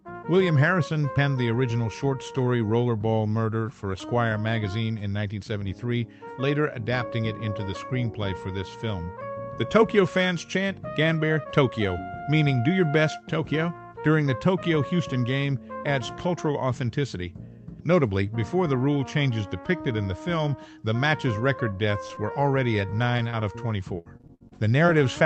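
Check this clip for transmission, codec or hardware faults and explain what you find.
One transmission fault: repeated packet loss (robotic sound) from 22.07 to 24.90 s. Packets kept going missing, and each hole was patched by stretching the previous sound, leaving eleven choppy gaps up to 69 ms long. The call codec also cuts off the top end above 8 kHz.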